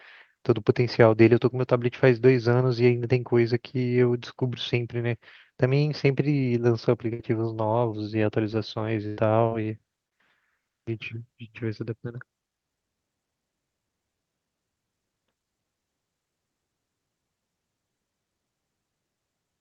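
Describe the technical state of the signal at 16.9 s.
At 16.9 s the speech signal is intact, with nothing beyond the ordinary character of the Opus call path it came through.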